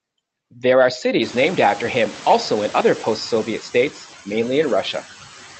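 Noise suppressor artifacts run through the whole clip. The background is pulled down by about 10 dB, dipping between phrases and swelling under speech. On a spectrogram it shows as a flickering, patchy noise floor.

From 1.21 to 3.37 s comes noise suppressor catching up. The room noise jumps roughly a second in, and the suppressor's estimate lags, so at first it removes only about 5 dB. The noise then sinks over 2.16 s, settling by "states mainly". A spectrogram would show a bright broadband floor that fades gradually, below an 8 kHz ceiling left by the call codec.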